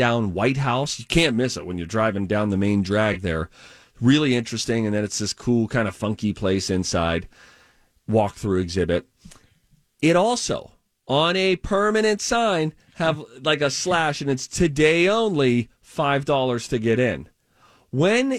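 A speech recording with nothing technically wrong that can be heard in it.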